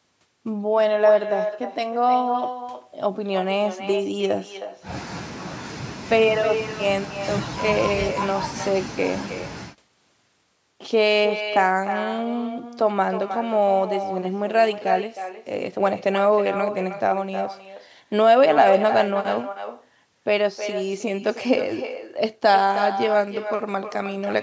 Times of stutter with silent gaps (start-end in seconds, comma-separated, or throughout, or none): none